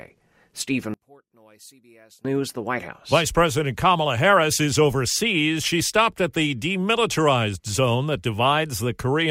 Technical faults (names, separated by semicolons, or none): one channel inverted